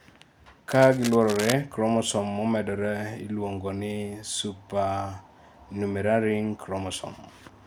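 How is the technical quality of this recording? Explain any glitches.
There's one real glitch, early on. From about 0.70 to 1.53 s you get cable scratch noise: a dense, uneven rustling over the speech, roughly 10 dB below it. It's likely a worn cable or connector being moved, its contact flickering.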